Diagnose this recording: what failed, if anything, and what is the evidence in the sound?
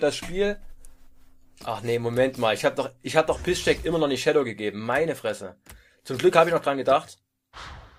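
Nothing stood out on listening that would point to a failure at any stage of the chain.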